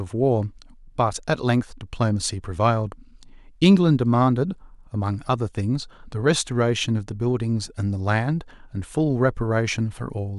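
No technical faults are audible at any point in the speech recording.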